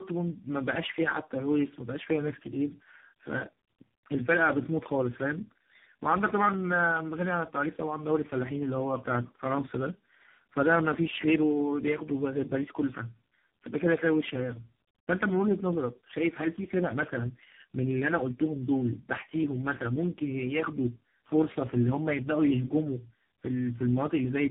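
A speech clip that's been through tandem speech coding for its whole length: it sounds like it crossed four different speech coders in a row, each one squeezing audio that the previous one had already mangled. The last stage has the character of AMR-NB, and there's nothing above about 3.8 kHz, so it's narrowband and muffled, with a rough, gritty texture and a warbly, smeared quality that no single codec would produce on its own.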